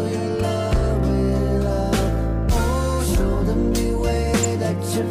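At 4.43 s a corrupt frame is decoded: a single compressed frame arrives with flipped bits, and the decoder plays it anyway, reading wrong gains or codes that put energy at the wrong frequencies. The result is a brief, fairly loud blip, peaking around -10 dBFS. Unlike concealed packet loss, nothing is smeared; a burst that doesn't belong to the sound around it briefly replaces the audio.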